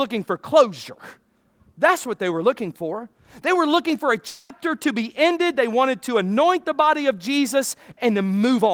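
It's a speech clip, and right after "were looking for a" at about 4.27 s the sound smears into a fading buzz until 4.51 s, then picks up at "to be ended" with roughly 0.22 s skipped, likely a long network dropout papered over by concealment.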